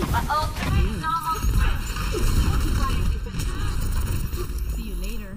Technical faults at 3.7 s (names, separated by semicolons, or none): channel delay (comb filtering)